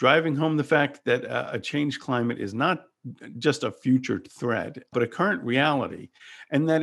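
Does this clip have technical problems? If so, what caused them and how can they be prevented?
No, nothing in this speech clip stood out as a technical problem on listening, so there is nothing to trace back or prevent.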